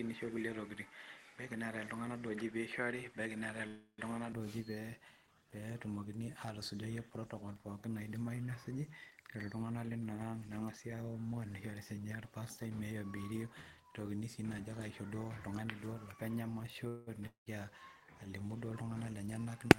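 Speech, and the first 4.33 s sound duller, with nothing above 11.4 kHz and a faint noise floor about 35 dB down, until it opens up right before "duo ooji". That's likely an input switched to a poorer device, with no gap at the switch. Inside that stretch, 3.67 to 4.01 s holds a 308 ms fill that fades to about 100 ms of silence, and 16.88 to 17.10 s has a 186 ms fill with no silence. Both are likely call audio freezes: the sound resumes where it stopped, so nothing's lost and it just lands later. At 17.27 to 17.49 s there's a different failure: a fill that fades into 130 ms of silence, and about 200 ms of sound never comes back, which is likely a long network dropout. There's a jitter buffer speed-up right after "protocols pookin naidimayu nesuji", 9.30 to 9.92 s at 112% speed with around 100 ms trimmed out, and another after "alimu duo", 18.87 to 19.46 s at 109% with about 70 ms gone. Both sound hurried at the same pitch.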